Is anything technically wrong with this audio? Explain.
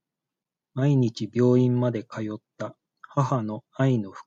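No, the speech signal shows no technical fault anywhere in the recording.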